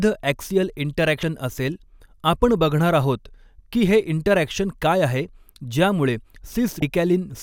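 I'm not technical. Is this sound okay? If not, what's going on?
No. There are two short glitches, from 1.20 to 1.23 s and from 6.79 to 6.82 s. Each is a brief chirp or blip. This is damaged data in a compressed stream. Some stored bits were spoiled, so the player misread them.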